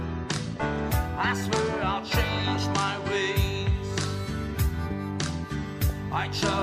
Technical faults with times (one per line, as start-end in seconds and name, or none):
0.57-0.65 DAB burbling
2.55-2.64 DAB burbling
5.82-5.90 DAB burbling